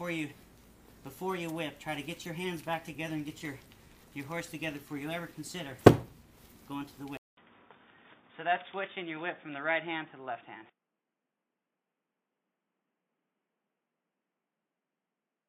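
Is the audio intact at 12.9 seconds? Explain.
No. At 12.9 s the sound is dull and boxy, with nothing above 3.6 kHz and faint new background noise, at unchanged level. This began at 7.17 s after a 200 ms silence and lasts to the end. The likely cause is an input switched to a poorer device.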